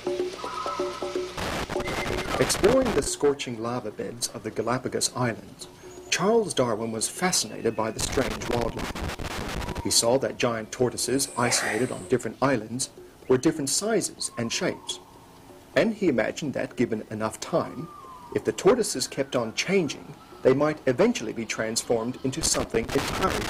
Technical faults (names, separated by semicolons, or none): loose connector crackle